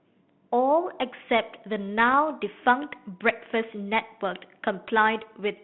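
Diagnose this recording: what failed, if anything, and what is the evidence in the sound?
Transmission-stage bit errors on the ADPCM link, 2.08 to 2.14 s: a corrupted decoder step size rings into a rough pop, a broadband spectrogram smear.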